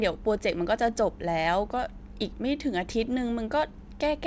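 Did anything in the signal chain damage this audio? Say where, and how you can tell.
No, nothing in the signal chain damaged this audio; the call path's G.722 codec simply leaves nothing above 8 kHz.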